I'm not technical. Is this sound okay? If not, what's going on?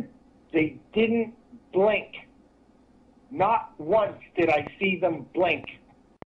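No, not quite. From about 4.67 to 6.23 seconds there's a train of clicks: roughly five sharp ticks, about two or three a second at an uneven pace. They sit on top of the sound, and they're likely from electrical interference or a faulty connection or power supply.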